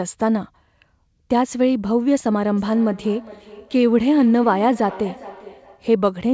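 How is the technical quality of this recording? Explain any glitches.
The recording carries a clear fault: from 2.56 s to 5.88 s the speech keeps returning as a faint, ringing echo. The audio also has nothing above 8 kHz, which fits a wideband call codec such as G.722.

This is feedback echo between two devices. Each phrase comes back roughly every 0.4 s, thinner and more metallic each time, peaking at about 19 dB below the speech. Two devices in the same room were likely on one call. One played the other's sound aloud, and that microphone caught it again. Each device's echo canceller removes only its own playback, so the loop goes unchecked.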